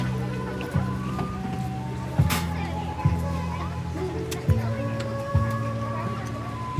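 Wrong sample rate, throughout the clip: the audio plays about 1.45 times too fast with no rate conversion, which fits material captured near 22 kHz being clocked out at 32 kHz. Speed and pitch rise together, so everything sounds hurried and roughly 6.5 semitones too high.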